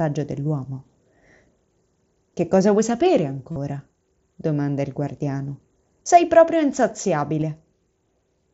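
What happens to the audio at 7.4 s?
At 7.41 s there's a brief concealed Bluetooth headset packet loss: about 15 ms went missing, and the receiver patched it by repeating recent waveform, so it sounds like a buzzy tone held at full level, with a small warble where real audio returns.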